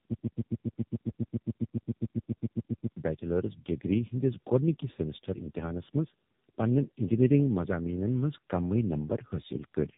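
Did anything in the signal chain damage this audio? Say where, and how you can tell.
Yes. From 0.0 s to 2.96 s there is a broken-record loop, already running when the clip begins. A fragment of about 137 ms repeats exactly, back to back, 21 times, and the speech that should have filled those three seconds never arrives. The likely cause is a stall at the playback or streaming stage that kept resending its last buffered fragment. Packet-loss concealment would fade or smear a repeat, and jitter would stutter irregularly. Here the copies are identical and perfectly periodic.

Throughout the clip the speech shows tandem speech coding at the codec stage. Nothing is present above 3.8 kHz, which is consistent with narrowband AMR-NB, and the sound is rougher, more muffled and more warbly than a single low-rate pass would leave it. That points to the audio being decoded and re-encoded twice, with a G.711-style link in between. 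The second AMR-NB encoder quantised artefacts left by the first, so the damage compounded rather than staying at one codec's level.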